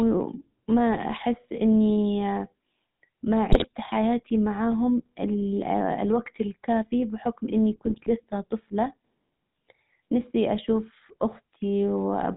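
The whole clip runs through the GSM full-rate codec, which fits a 13 kbps stream: nothing above 4 kHz, and the voice carries that buzzy, gravelly roughness. GSM bit errors hit at 3.51–3.67 s, just before "حياتي معاهم", and at 7.86–8.11 s, between "الوجت الكافي بحكم اني" and "لسه طفلة". Corrupted decoder values turn the speech into squawks, pops and gargling, which points to an error rate of around 2%.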